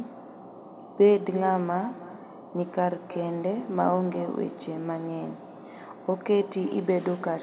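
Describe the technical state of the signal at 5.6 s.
At 5.6 s, as throughout the clip, there is echo with no canceller. The far end's loudspeaker feeds its microphone and nothing removes it, so the speech returns roughly 0.3 s later, about 17 dB quieter, as a thin shadow.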